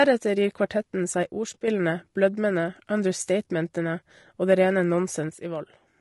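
From the first second the speech has a rough, grainy edge, with a hiss sitting between the harmonics and a top end that sounds thin and a bit synthetic. That's likely low-delay AAC compression, the AAC-ELD kind used in video calls. Its very short frames can't pin down pitch harmonics cleanly, so at a tight bitrate, in the range of 32 kbps here, the codec fills the gaps with noise and fakes the highs.

At 1.23 s, right after "gir kvartetten", the level suddenly sinks by about 6 dB and stays down until 1.68 s, coming back just before "blødmene understatementene". It happens again at 5.29 s after "det rene" and doesn't recover before the clip ends. Both dips sound like one channel drops out. With only one side left in the mono sum, anything shared by both channels loses about half its level at once.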